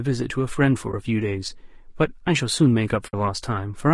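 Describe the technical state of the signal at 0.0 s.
At 0.0 s the speech already sounds rough and grainy, and it stays that way throughout. Noise fills the gaps between harmonics. The top band sounds thin and synthetic. This is likely low-delay AAC compression, whose short frames resolve pitch poorly, consistent with roughly 32 kbps.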